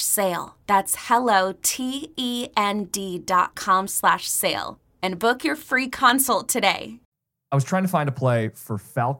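Five sharp clicks sit in the speech at 0.48, 2.79, 4.26, 6.10 and 6.93 s. In order: 0.48 s; 2.79 s, before "dot com slash sale"; 4.26 s, after "dot com slash"; 6.10 s, after "book your free"; 6.93 s. Each is likely dropped samples. A fraction of a millisecond goes missing, so the waveform jumps.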